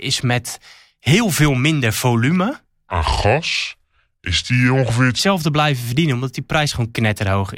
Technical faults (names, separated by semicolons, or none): section at the wrong speed